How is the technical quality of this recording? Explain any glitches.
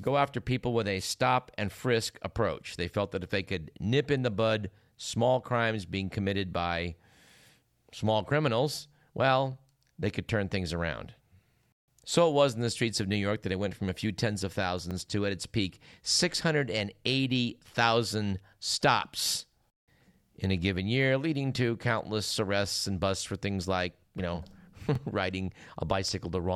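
There's a regular stutter from overlapping chunks. At 4.86–4.89 s (after "nip in the bud"), 9.89–9.91, 14.91–14.93, 19.93–19.95 and 24.95–24.98 s, each 5-second chunk starts about 23 ms early, so that sliver replays as a brief click-stutter.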